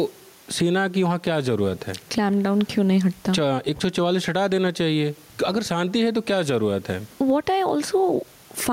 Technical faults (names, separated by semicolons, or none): gain pumping